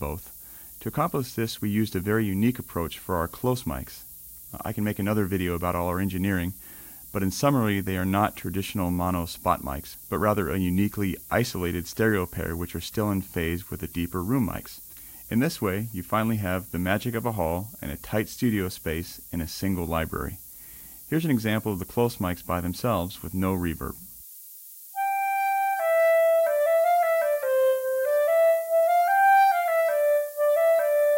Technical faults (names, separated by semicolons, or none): low bit depth with noise shaping